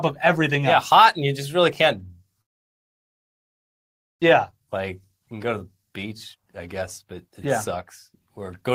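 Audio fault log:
2.41–4.24 s, long network dropout: Audio stops arriving at 2.41 s. The last sound is stretched into a buzzy tail that fades into near-silence, and nothing useful returns until 4.24 s, a gap of about 1.8 s. When the audio resumes it has skipped ahead, and roughly a second of material never plays. The receiver appears to have lost contact with the stream, likely from a network outage, and rejoined it at a later point with roughly 0.7 s more delay.
4.51–8.71 s, jitter buffer speed-up: After the dropout the speech runs at 114% of normal rate while the pitch stays the same, so it sounds hurried. The receiver's jitter buffer was holding the extra delay built up during the outage. To shrink it, the receiver repeatedly removed short pitch-period-sized pieces over the 4.2 s stretch, cutting out roughly 0.7 s in total and bringing latency back to its target.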